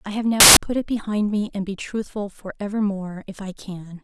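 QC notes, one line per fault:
0.40–0.57 s, samples built from the wrong bytes: the speech turns abruptly into loud, harsh broadband noise, as each sample's bytes were joined wrongly and the fast-changing low bits became its large part.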